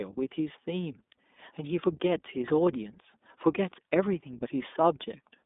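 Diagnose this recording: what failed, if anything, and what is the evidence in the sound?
Codec stage, iLBC codec throughout: the speech sounds rough and synthetic. A spectrogram shows nothing above 3.8 kHz and a band of about 250 Hz to 3.6 kHz; the codec runs 20 ms frames at 15.2 kbps.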